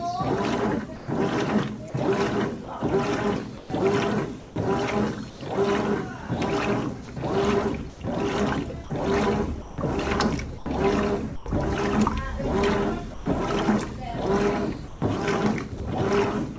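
Brief gaps filled with steady hiss, where the sound is dropped by the voice detector, appear at 0.96–1.08 s (120 ms), 7.06–7.08 s, 7.90–8.00 s and 13.14–13.26 s. The likely cause is the sender misjudging the sound as background and stopping sending, so the receiver played comfort noise instead. Choppy stretches, where the sound is chopped by the voice detector, run from 1.90–2.68 s, 3.58–5.40 s, 8.84–11.46 s and 14.88–15.80 s. Here the sending likely switched on and off repeatedly, losing up to about 400 ms to synthetic noise.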